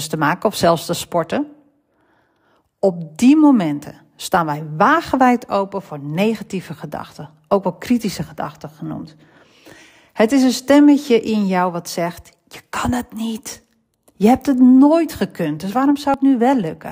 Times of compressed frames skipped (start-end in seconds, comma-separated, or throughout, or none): 16.05-16.14